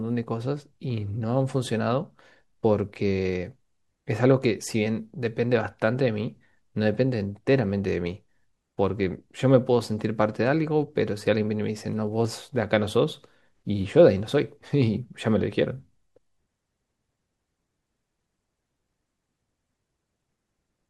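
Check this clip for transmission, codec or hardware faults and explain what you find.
Nothing jumped out at me here; I went through the speech and couldn't find anything amiss in how it was sent, encoded or captured.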